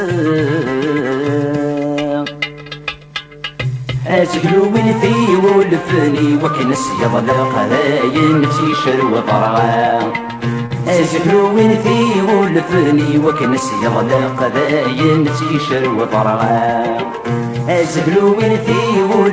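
Two moments of short concealed packet loss: audio packets failed to reach the decoder in time, and the receiver covered each gap by extending the preceding sound before crossfading back into real audio. At 2.64 s about 20 ms is missing, heard as a brief smear. At 10.66 s the gap is about 40 ms, heard as a brief wobble. The G.722 call path carries nothing above 8 kHz.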